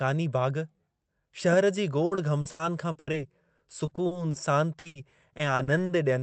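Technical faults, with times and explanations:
2.05–3.15 s: repeated packet loss (robotic sound). Eight gaps of up to 80 ms are each filled by extending the previous sound, concealing about a third of the stretch, so the speech turns choppy and robotic.
3.57–4.35 s: repeated packet loss (robotic sound). Six shorter gaps of up to 40 ms are patched with continued sound, covering about 18 percent of the span, which gives a lighter, intermittently mechanical stutter.
4.79–5.91 s: repeated packet loss (robotic sound). Eight gaps of up to 80 ms are concealed by repeating the last audio, roughly 29 percent of the span, so the speech sounds broken and robotic again.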